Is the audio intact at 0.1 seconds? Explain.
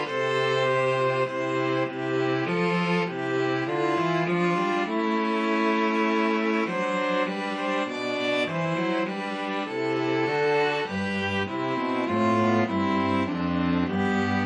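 Yes, at 0.1 seconds the audio is intact, with no dropout, click, distortion or other fault at that moment.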